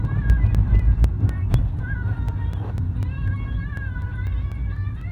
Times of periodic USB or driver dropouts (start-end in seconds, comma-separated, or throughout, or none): 0.05-5.01